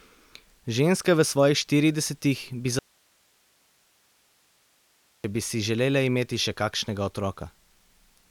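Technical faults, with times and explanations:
2.79–5.24 s, audio dropout to a faint residue: the speech feed was most likely interrupted upstream while the recording path behind it stayed open, so for about 2.45 s the speech is simply gone and only hiss remains, sitting roughly 40 dB below the speech level. The cut in and out is abrupt rather than faded, so it reads as a break in the chain and not a natural pause, and speech resumes mid-flow at "bi si želele imeti".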